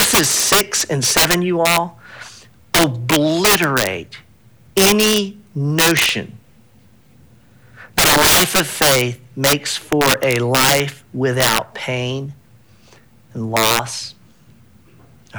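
Integer overflow runs through the whole speech clip. The signal is driven about 15 dB past the integer limit, and instead of being held at the ceiling, each sample that exceeds it wraps around to the opposite sign and jumps across the full range. Around 2 percent of samples are affected, all on the loudest peaks, where the sound breaks up with an abrupt crack that is much sharper than ordinary clipping.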